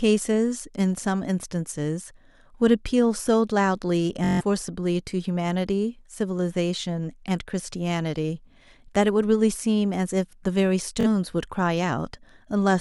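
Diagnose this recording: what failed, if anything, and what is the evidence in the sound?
Bluetooth stutter in the wireless link at 4.24–4.41 s and 11.01–11.07 s. Lost packets made the receiver loop a short slice, which shows as regularly repeating vertical stripes.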